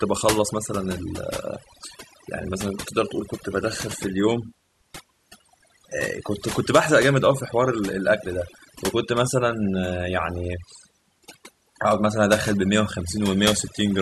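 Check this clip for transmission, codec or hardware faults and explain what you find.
One fault runs through the whole recording: overdone noise removal. A noise suppressor set far too aggressively cuts individual frequency bands whenever they sit close to its noise estimate, taking quieter parts of the speech along with the noise. Gaps fall to near silence dotted with twinkling specks. Unlike codec artefacts or dropouts, the damage follows signal level rather than timing, hitting soft passages hardest.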